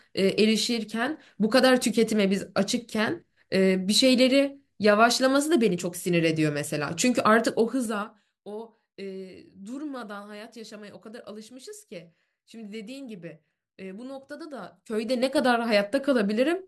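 Zipper noise turns up twice in this speech. From 7.42 to 8.41 s the level drops by roughly 15 dB in 3 dB jumps, around five a second, with no smoothing. Each jump puts a small click on the speech, so you hear a ticking zip riding on it as it falls. It happens again from 14.55 to 15.40 s, this time climbing back up by about the same amount, a bit faster at around seven steps a second.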